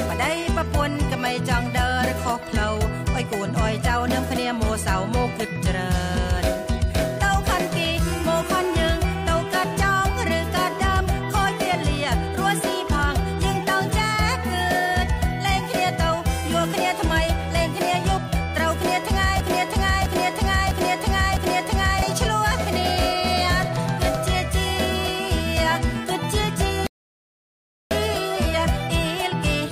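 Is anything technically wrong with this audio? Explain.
Yes, there are two faults. From 19.40 to 22.02 s there is a broken-record loop. A 655 ms fragment repeats exactly, back to back, four times. The likely cause is a stalled player or stream re-sending the last buffered piece. The audio that should have played across those 2.6 seconds is gone. From 26.87 to 27.91 s there is a rebuffering stall. The player ran dry of downloaded data, so the sound cuts to silence for 1.04 s and then resumes exactly where it stopped. Nothing is skipped, but that second is added to the running time.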